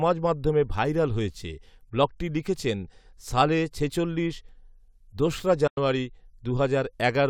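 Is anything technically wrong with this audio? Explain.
Yes. From 5.67 to 5.78 s the speech drops out into silence for about 93 ms, then comes back further along, as if it had carried on playing unheard. This is likely a Bluetooth dropout: audio packets reached the headphones too late and were discarded, and a gap this long fits a handful of lost packets.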